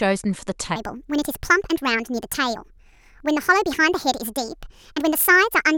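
From 0.76 s to the end, the speech turns high and hurried, running 1.5 times too fast and pitched up by about seven semitones, so voices take on a chipmunk-like brightness. This is a wrong sample rate fault. Audio captured at 32 kHz is being played back at 48 kHz with no conversion between them. Because the samples are simply read out faster, speed and pitch rise together by that same 1.5 ratio.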